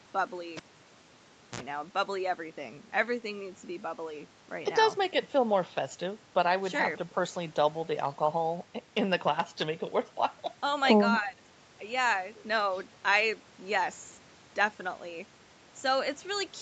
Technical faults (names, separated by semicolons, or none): cable pulled and plugged in; speech suppressed in double talk